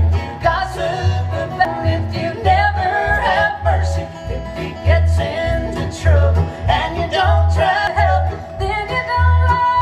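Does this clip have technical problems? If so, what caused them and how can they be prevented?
Yes, there are two short glitches from damaged data in a compressed stream, at about 1.65 s and 7.87 s. Each is a quick blip where a chunk of the encoded stream got corrupted, so the decoder couldn't make sense of those frames, lost its place, and had to hunt for the next valid frame header before the audio carried on. To prevent it, move files with checksums and use a container or transport with error detection.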